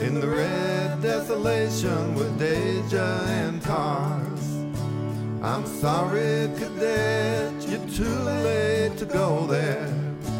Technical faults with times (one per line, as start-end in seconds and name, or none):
none